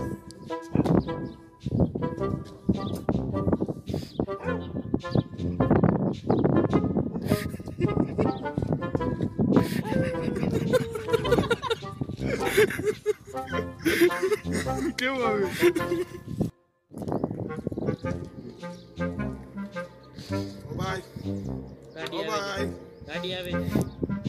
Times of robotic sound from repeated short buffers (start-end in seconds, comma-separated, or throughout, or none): none